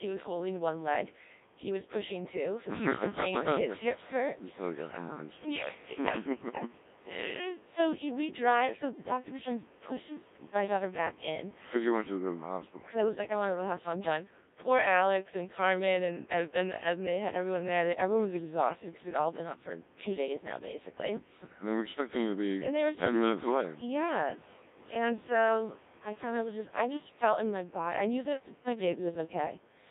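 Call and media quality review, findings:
Codec 2 vocoder, full clip duration, heavy damage. Speech robotic and buzzy throughout, waveform detail absent. Decoder rebuilds speech from sine waves using only pitch, voicing, energy and spectral envelope. Degradation level fits a very low-rate mode, around 1.3 kbit/s. Room noise about 29 dB below speech.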